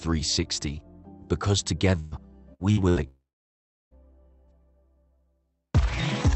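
The audio carries a burst of packet loss four times in quick succession, at 1.99 to 2.14 s, 2.53 to 2.62 s, 2.71 to 2.80 s and 2.89 to 2.99 s. Each time, packets went missing and the receiver stretched the last sound to cover them. That is heard as a short held buzz or hiss that fades. The first gap is about 120 ms. The others are about 60 ms each. After each one the sound picks up further on, with that stretch gone. Then, from 3.08 to 3.94 s, there is a long network dropout. The last sound is carried on briefly and fades. For about 0.7 s only silence remains. The sound then returns past the missing part, with roughly 0.84 s lost. An outage on the network is the likely cause. Throughout, the call codec band-limits the audio to about 8 kHz, which fits an Opus call path.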